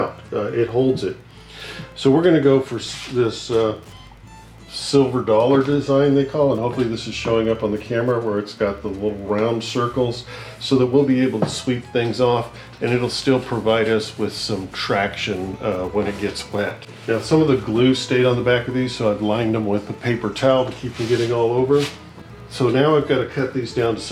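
A faint, steady ticking runs through the whole clip. It is Wi-Fi interference. A nearby Wi-Fi radio sends a beacon every 102.4 ms. Its radio energy leaks into the audio circuit, and the circuit rectifies it into an audible click. The ticks arrive about ten times a second, evenly spaced and mechanical. They sit far below the main sound, roughly 40 dB down, so they stand out most in the quieter moments.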